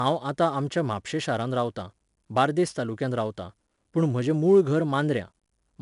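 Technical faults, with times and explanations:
Throughout, 4-bit ADPCM compression: each sample is a coarse 4-bit step from a prediction, so plainly audible noise follows the speech level. Nothing sounds above 10.6 kHz.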